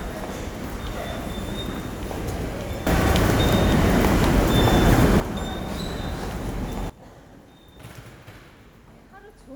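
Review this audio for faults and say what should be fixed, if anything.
There are two sudden gain jumps. At 2.87 s the level rises abruptly by about 12 dB and stays there until 5.20 s. At 6.90 s it drops by about 18 dB and stays low to the end. At each step the background noise moves with the sound, which likely means the digital gain changed instantly from one sample to the next, with no ramp. Gain changes should be applied with a short fade so the level moves smoothly.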